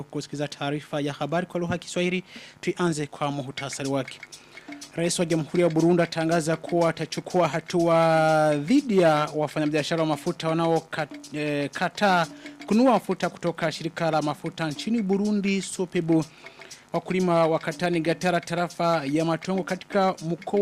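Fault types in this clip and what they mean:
No technical faults can be heard in this clip. Nothing in the audio calls for an entry under any fault type.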